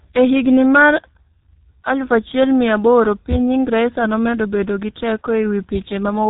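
Throughout the clip the speech has passed through a G.723.1 codec, a low-rate telephony coder working in 30 ms frames, and the coarse, heavily damaged result fits a bitrate around 6 kbit/s. Nothing survives above 3.8 kHz, so the voice sounds muffled and hoarse, with smeared consonants.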